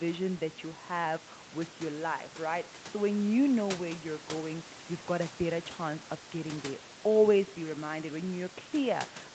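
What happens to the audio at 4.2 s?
Nothing goes wrong at 4.2 s: the speech carries on intact through that moment, with only the room noise about 19 dB below it.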